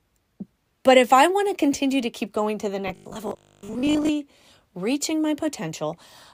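From 2.88 s to 4.09 s, the speech turns into robotic sound from repeated short buffers. A rigid, metallic buzz sits on the voice. Its pitch is fixed at 50 Hz, which fits a 20 ms buffer being replayed. The likely cause is audio arriving too seldom. The player fills each gap by looping the last stretch it had. About half the sound in this span is repeats. The real audio underneath is skipped.

At 3.31 s, inside that robotic span, there is an overlap between stream segments. Two segments claim the same moment in time. The player trims the shared part, though that sound was not really doubled. A few milliseconds of audio vanish. The waveform jumps across the gap. It is heard as a brief click or tiny skip, layered over the buzz.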